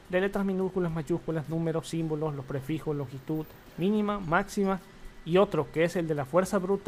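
Nothing technically wrong turns up anywhere in this one, so there's nothing to point to.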